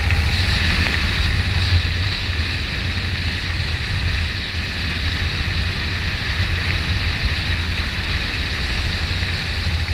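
Nothing in the audio stood out as a technical problem on listening.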